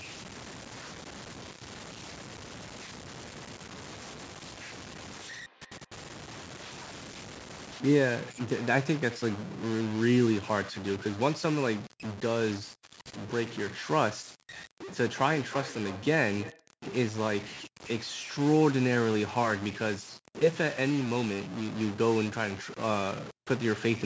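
From start to finish the speech carries distortion, and the pauses fill with noise rather than falling silent. This points to a stuck bit. One data bit is likely held at a fixed value, pushing about half the samples off by that bit's weight.

From 3.14 to 7.34 s there is a feedback echo between two devices. The speech returns roughly every 300 ms, faint at about 32 dB below the speech. It comes back again from 14.82 to 16.71 s, much louder at about 15 dB down. One device plays out what the other's microphone captured. That microphone picks it up again, so each repeat sounds thinner and more ringing. Through all of this, the call's microphone processing leaves nothing above 8 kHz.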